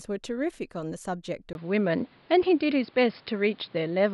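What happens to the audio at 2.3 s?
Input switched to a poorer device, from 1.53 s to the end, covers 2.3 s. After a 20 ms gap, the speech likely comes through a narrower-band microphone, with nothing above 5.2 kHz, a dull, boxy tone, a level shift of a few decibels and faint new background noise.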